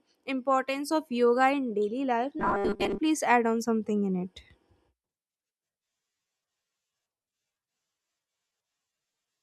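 Robotic sound from repeated short buffers runs from 2.40 to 2.99 s, just after "yoga in daily life" and ending before "please add on something". The speech collapses into a stiff, metallic buzz pitched at 200 Hz that still roughly traces the words. The likely cause is audio arriving too slowly, so the playback keeps looping a tiny buffer, which fits a 5 ms fragment, while most of the real signal in that stretch is skipped.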